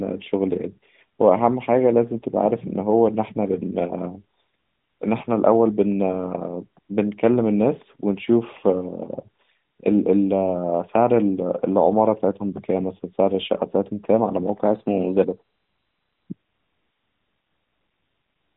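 From 14.65 to 16.26 s the speech runs about 5.5% fast and sits roughly 93 cents sharp, close to a semitone, before snapping back to normal. The likely cause is a drift correction step, where software reconciling two clocks abruptly changed the playback rate to rebalance its buffer. Because speed and pitch move together, the voice sounds briefly hurried and detuned, a shift heard against the narrow, phone-like AMR narrowband band around it.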